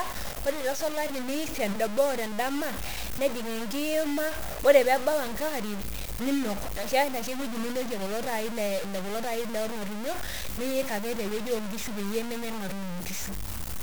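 From start to finish the speech carries a coarse, grainy distortion that moves with the sound. The likely cause is low bit depth without dither, and the grain fits samples truncated to 5 bits. The error sits only about 10 dB below the signal.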